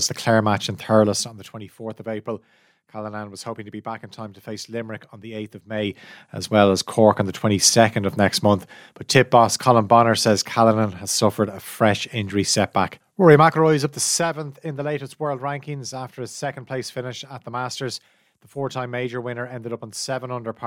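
A fast ticking rides on the speech just after "match in", from 0.98 to 1.65 s, as the level drops by roughly 15 dB. The same zipping returns from 5.69 to 6.13 s, before "as well as", as the level climbs back, and again from 13.33 to 14.70 s, before "the latest world rankings", on another fall. This is zipper noise: the gain moves in unsmoothed steps, about 1 dB each in the first two passages and finer in the last, some forty times a second, and every jump clicks.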